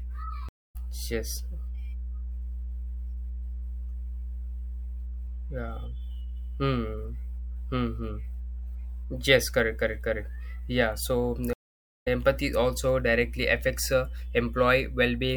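Mains hum at 60 Hz runs through the whole speech clip, a steady, fairly strong low tone from power-line coupling. It is a fixed pitch, unlike broadband noise or rumble. A stream reconnect occurs at 0.49–0.76 s (0.26 s silence) and again at 11.53–12.08 s (0.53 s silence) before "also directly affects uh". Each time the connection dropped and a fresh decoder resumed slightly later, skipping material, unlike a simple dropout.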